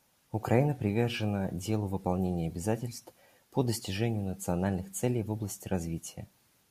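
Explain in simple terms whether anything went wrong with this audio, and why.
Nothing went wrong with this audio; the speech comes through with no fault to point to.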